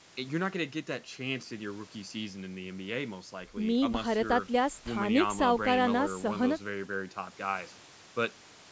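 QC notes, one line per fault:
Nothing stood out on listening to this speech clip.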